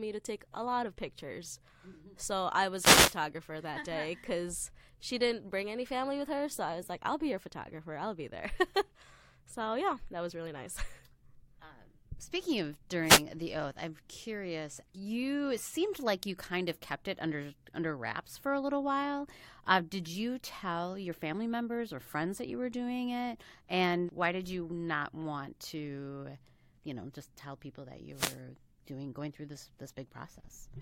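At 2.76 s there's a wireless microphone noise hit running to about 3.18 s: the FM signal fades as reflections cancel, receiver noise climbs and you get a swish of static over the speech. Another, shorter one follows at 13.03 to 13.23 s. At 23.41 s a brief blip marks damaged data in the compressed stream, where the decoder misreads a frame and searches for the next frame header to resync. A last wireless hit lands at 28.13 to 28.40 s.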